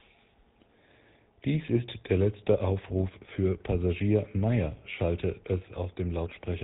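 From start to finish, the speech passes through the GSM full-rate codec, and the damage is plainly audible. Nothing reaches above 4 kHz, and the codec models the vocal tract while driving it with a thinned, regularly spaced pulse train, which leaves a buzzy, gravelly grain on every voiced stretch and fits the 13 kbps full-rate coder. Simple band-limiting would only dull the top end; this codec also roughens the texture of the voice itself.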